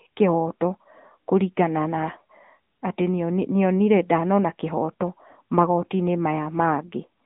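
Speech, carried throughout by the AMR narrowband mobile codec: nothing above about 3.8 kHz survives, and the band is squeezed to roughly 150 Hz to 3.7 kHz, giving a thin telephone tone. The codec rebuilds the voice from a vocal-tract model excited by sparse pulses, and the plainly audible synthetic roughness fits a mid-rate mode of around 10 kbps. On a spectrogram, energy stops at a hard ceiling near 3.8 kHz with an empty region above.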